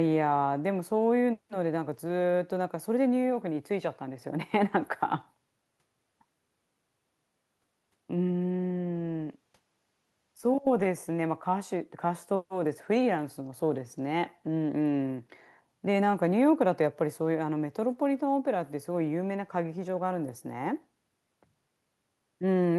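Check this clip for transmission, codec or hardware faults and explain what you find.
No faults can be heard anywhere in this speech recording.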